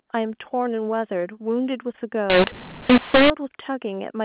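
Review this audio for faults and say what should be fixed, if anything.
A mu-law and A-law mix-up runs from 2.30 to 3.30 s. That second of telephone speech was coded as A-law but decoded as mu-law, so its logarithmic level steps are misread: some samples swell, others shrink, quiet moments fill with noise, and the speech turns harsh. To prevent it, signal the G.711 law explicitly with the stream and confirm that encoder and decoder use the same one.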